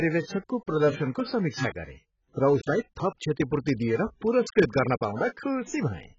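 From start to finish the speech has most likely passed through AAC compression at a very low bitrate, on the order of 12 kbps for an AAC-LC stream. Starved of bits, the encoder has cut everything above 7.6 kHz and coded the remaining spectrum coarsely. The damage is heavy: the speech sounds dull and smeared, with a warbling, fizzy texture on sustained sounds and on sibilants.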